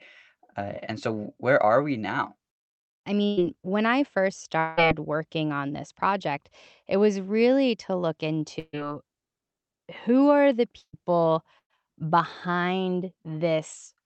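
At 3.25 s a burst of packet loss replaces about 120 ms of speech. The receiver fills the gap with a 117 ms extension of the last sound, heard as that sound held and fading, and speech resumes slightly further on with that stretch missing. From 4.59 to 4.79 s, between "when I first" and "working on this project", about 180 ms vanishes under a longer decaying extension of 181 ms. This sounds like a short long network dropout, likely caused by a brief stall in arriving audio rather than scattered losses.

Three more bursts of packet loss follow. At 8.59 s, just after "was really to look", a 138 ms concealment tail fades into 30 ms of silence before speech resumes, with about 140 ms lost. At 10.81 s, after "who are the", a 117 ms fill is followed by 70 ms of silence. From 11.59 to 11.81 s, a 110 ms fill is followed by 100 ms of silence, with about 120 ms missing.

All of this sits on the Opus call path, whose high end stops at about 8 kHz.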